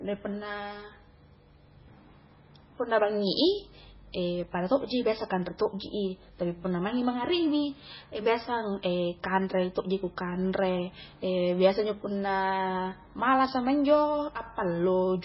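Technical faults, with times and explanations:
Throughout, MP3 compression, heavy: the speech sounds watery and swirly, with smeared onsets. This is likely a very low bitrate, around 16 kbps. Nothing is left above 5.6 kHz, which shows on a spectrogram as a hard ceiling, with flickering holes where weak frequency lines drop in and out between frames.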